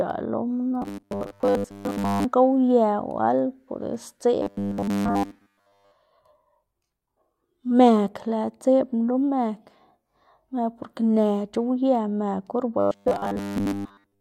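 Robotic sound from repeated short buffers occurs at 0.82–2.25 s, 4.42–5.92 s and 12.80–14.20 s, the last just after "or ba". Speech collapses into a rigid, metallic 100 Hz buzz, likely from a roughly 10 ms buffer being replayed while most real audio is skipped.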